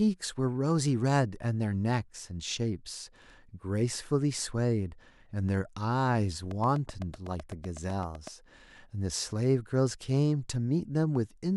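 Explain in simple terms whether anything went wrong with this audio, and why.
From 6.51 to 8.28 s, about fifteen evenly spaced ticks, eight a second, sit over the speech: a train of clicks, likely from equipment interference.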